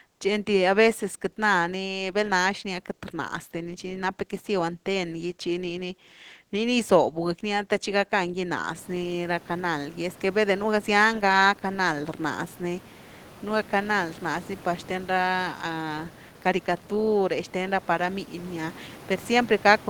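No technical faults in the speech; the room noise rises by about 24 dB around 9 s and then sits about 22 dB below the voice, which is part of the recording environment rather than the signal chain.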